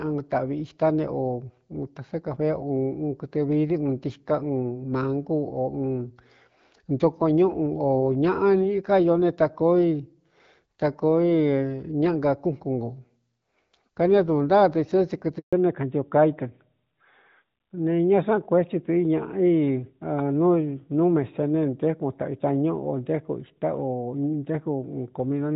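At 15.39 s there's a handover gap: the speech cuts out for about 140 ms, until 15.53 s. That's the sound of the call being passed from one network to another, with no speech frames getting through while the switch happens. The voice fades out almost instantly, there's a short stretch of dead silence, and whatever was said in that window is simply gone rather than smeared or repeated.

Right where the audio comes back, at 15.53 s, you get a fallback to narrowband that holds to the end of the clip. Before the gap, the light codec texture points to HD Voice running around 12.65 kbit/s. After it, everything above 4 kHz is missing, which fits the older AMR-NB codec at roughly 12.2 kbit/s. The sibilants and crisp consonants lose their top end, and the voice sounds duller and a bit rougher, much like a classic phone line.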